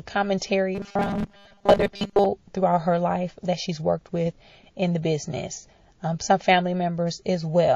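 A speech clip with plainly audible MP3 compression running through it, likely from a low-bitrate encode around 32 kbps: the sound is watery and swirly, and on a spectrogram the treble stops at a hard ceiling while weak high-frequency detail flickers on and off in patches from frame to frame. Pre-echo appears at 0.38 to 0.42 s, where a smear of hiss about 37 ms long, roughly 18 dB above the quiet floor, runs ahead of a sharp attack. The encoder spread its noise over a long block without switching to short ones, so the waveform shows fuzz before the onset and the spectrogram a broadband smudge leading it. From 0.75 to 2.27 s the speech turns into a rigid metallic buzz at 200 Hz, robotic sound from repeated short buffers, likely caused by audio arriving too seldom so that a 5 ms stretch, fitting that pitch, is replayed in place of most of the real signal, roughly seven tenths of it. The waveform there shows identical short cycles tiling the span, and the spectrogram shows evenly spaced horizontal harmonics at multiples of 200 Hz.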